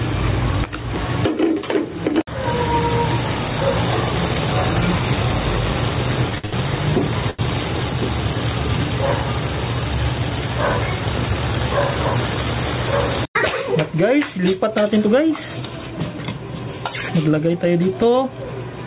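The level of the whole recording breathes, swinging by roughly 15 dB, so loud and quiet passages sit unnaturally close together and the sound feels squashed. This gain pumping is likely caused by input gain set far too high, with a fast limiter or compressor clamping down on every peak and then letting the level climb again. Between 6.30 and 6.54 s the audio catches and drags in a series of repeated stalls (stutter): four separate hitches, the longest about 67 ms, together filling 142 ms, so roughly 59% of that quarter-second is held-over sound rather than fresh audio. Packets were arriving late or too slowly, the jitter buffer kept running dry, and the receiver extended the last sound each time until it could continue. Nothing is lost, but the flow jerks. Shortly after, at 7.30 to 7.41 s, a single sound hangs on too long with a faint buzzy or dipped quality. This is a short stall from a late packet: one packet missed its slot, the buffer emptied, and the receiver stretched the preceding audio for 83 ms before resuming from the same point, which added that much delay. 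From 17.80 to 18.39 s the audio rushes ahead at about 109% speed without any change in pitch, sounding hurried. This jitter buffer speed-up trimmed around 50 ms in total, cutting out many pitch-period-sized slivers in succession so the receiver could work off a surplus of buffered audio and shrink its delay. Throughout, nothing is heard above 4 kHz, which fits a narrowband telephone codec such as G.711 on the call path.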